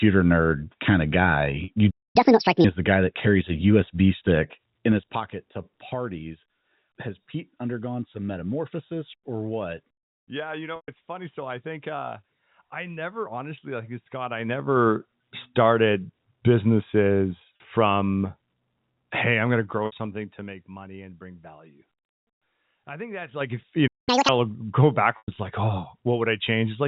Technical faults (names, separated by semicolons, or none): packet loss with pitch repetition; playback stall; catch-up at higher speed; zipper noise